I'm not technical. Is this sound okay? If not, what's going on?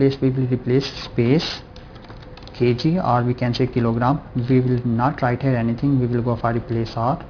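No. Aliasing runs from start to finish. The sound was squeezed into a lower sample rate, which fits a drop to 11 kHz, without removing the high frequencies first. Everything above 5.5 kHz folds back as wrong, unrelated tones, giving a gritty, metallic edge.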